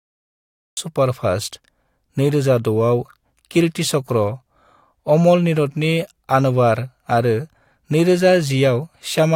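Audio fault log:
0.00–0.77 s, cut-off start: digital silence until the speech begins abruptly mid-sound at 0.77 s, with no natural attack, unlike a fade-in's gradual rise.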